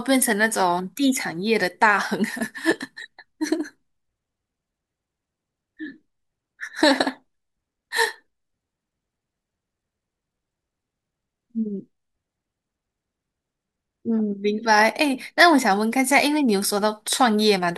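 No audible technical faults.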